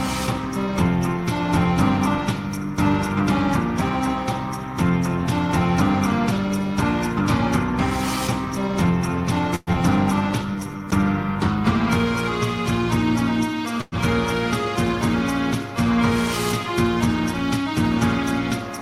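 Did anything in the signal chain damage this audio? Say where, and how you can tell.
Yes, at the network and jitter-buffer stage of a call path.

Long network dropout, 9.55 to 9.76 s. The sound stops arriving and is carried on as a fading buzz or hiss for about 180 ms, with a brief silence of about 20 ms before the audio resumes. When it returns, about 60 ms of material is simply gone. This points to packets that were most likely lost in transit rather than merely late. Afterwards the playout delay sits at a different point, shifted by roughly 70 ms.

Jitter buffer slow-down, 10.56 to 10.86 s. The sound drags at about 83% speed while keeping its pitch, stretched by about 57 ms in total. The receiver was building up its reserve by repeating single pitch periods or pieces of pauses over and over. That is why the passage feels drawn out rather than lower in pitch.

Call audio freeze, 13.81 to 13.95 s. 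The last sound is held as a decaying buzz or hiss for about 108 ms, ending in roughly 10 ms of silence. The audio then picks up exactly where it stopped, with nothing missing. The likely cause is packets delayed on the route until the jitter buffer ran dry. Because nothing was dropped, the stall inserts a gap and pushes everything after it back by about 108 ms.

Jitter buffer speed-up, 18.59 to 18.78 s. Near the end the sound hurries at about 121% speed with unchanged pitch. The receiver was trimming excess delay, likely after a burst of late packets arrived together, by cutting out short runs of one or a few pitch periods. About 50 ms was removed, which gives the rushed, compressed feel.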